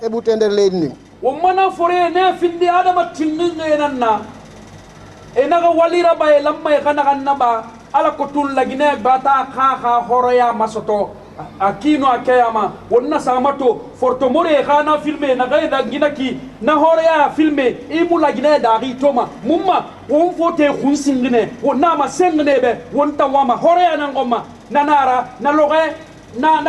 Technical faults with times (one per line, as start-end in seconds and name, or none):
none